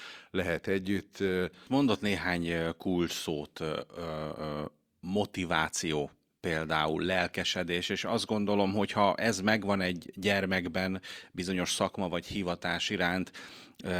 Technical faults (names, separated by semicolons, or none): none